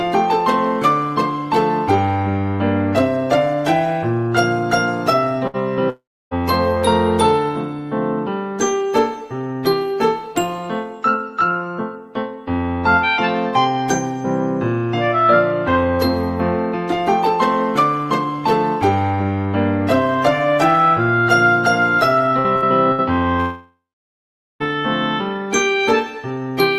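At 5.47 to 5.57 s a burst of packet loss removes about 60 ms of audio. The receiver stretches the last sound into a short fading buzz or hiss, and the audio then resumes later, seen as a smeared, repeated spectral slice.

From 5.90 to 6.34 s the sound decays into roughly 0.29 s of near-silence before resuming further on, with about 0.42 s skipped, likely a long network dropout. On a spectrogram this is a fading blur, then a blank band.

Three more bursts of packet loss follow at 22.39 to 22.47 s, 22.56 to 22.65 s and 22.92 to 23.01 s, each a brief held buzz or hiss that fades.

At 23.40 to 24.63 s what is likely a second dropout fades into about 0.8 s of silence, with 1.2 s of audio missing. The waveform shows a flat gap there.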